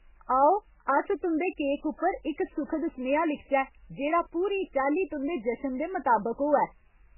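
MP3 compression is likely behind the damage that runs from start to finish: nothing survives above 3 kHz, and the speech sounds watery and swirly as weak frequency lines flicker between frames, heavy smearing that fits a starved bitrate around 8 kbps.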